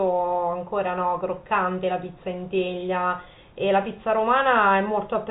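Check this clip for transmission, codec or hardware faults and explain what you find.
No transmission, codec or hardware faults can be heard in this speech clip; it carries the narrow band of G.711 telephone coding, with nothing above about 3.8 kHz and at most a faint level-following quantisation hiss from the coding.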